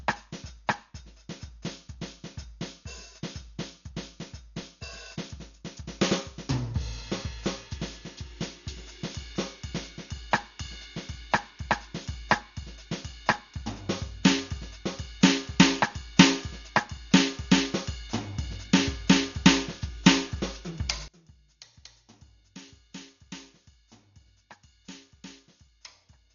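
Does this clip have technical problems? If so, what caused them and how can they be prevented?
Yes. Dolby Digital compression runs through the whole music clip: it sounds dull and heavily damaged, with nothing above 7 kHz and rough, fluttering noise around tones. This is likely from AC-3 encoding at a very low bitrate, near 48 kbps, where the encoder narrows the band and the decoder fills starved frequency lines with dither noise. Encoding at a higher bitrate would prevent it.

One channel inverted, from 21.08 s to the end: the music drops by about 22 dB. The likely cause is a polarity reversal on one stereo channel, so shared content cancels when the two channels are summed to mono, leaving only their difference. Checking channel polarity and mono compatibility before export would prevent it.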